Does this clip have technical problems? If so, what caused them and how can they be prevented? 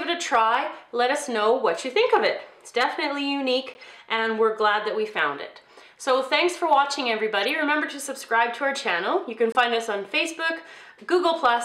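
Yes. Three short bursts come from a corrupt frame decoded: at 3.74–3.81 s, 7.43–7.49 s and 9.52–9.56 s. Flipped bits in the compressed data led the decoder to misread gains or codes and put energy at wrong frequencies. Each burst is a brief chirp or noise blip lasting a few frames (a single frame at 9.52 s). The loudest peaks near about -20 dBFS at 7.43 s, and the quietest is about -35 dBFS at 3.74 s. Checksums on the stream, with failed frames concealed rather than played, would prevent it.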